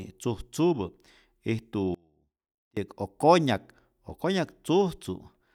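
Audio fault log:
1.95–2.77 s, audio dropout to a faint residue: speech cuts abruptly for 0.82 s, leaving only a faint trace about 30 dB down, likely a signal loss while the path stayed live.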